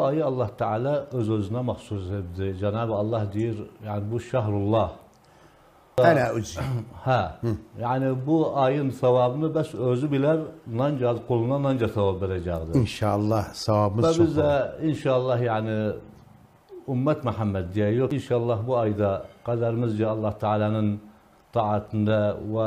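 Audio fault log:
5.98 s and 18.11 s, CD skip: a brief tick and a mute of a few milliseconds as the laser jumps tracks. Playback resumes from a displaced point, unlike a plain dropout.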